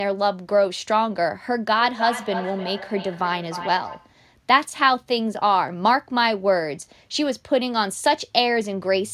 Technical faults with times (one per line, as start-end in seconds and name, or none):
1.75-4.22 feedback echo between two devices